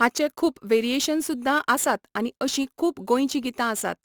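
Crude rate conversion runs throughout this speech clip. The sound points to a change from 44.1 kHz to 48 kHz done by simply repeating the nearest sample rather than filtering, so about one output sample in twelve is a duplicate. That uneven stepping repeats in a fixed pattern and creates shifted, inharmonic copies of the speech, sitting around 20 dB below it, heard as a gritty, inharmonic fizz that rides on louder and brighter syllables.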